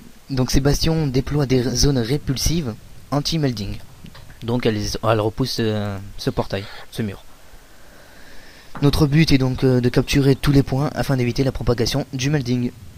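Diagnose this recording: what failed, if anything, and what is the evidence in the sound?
Call bitrate drop from 0.34 s to 1.83 s: the sound turns coarse and watery with its top end dulled for about 1.4 s, consistent with the encoder falling from around 128 kbps to near 21 kbps after the call's bandwidth estimate collapsed, then recovering.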